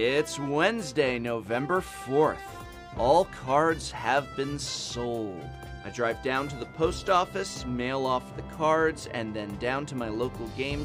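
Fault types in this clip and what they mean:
There are no fault types in this clip to list or explain.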